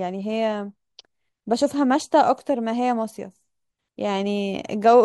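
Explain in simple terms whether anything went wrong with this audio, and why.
Nothing stood out as going wrong when listening to this speech recording.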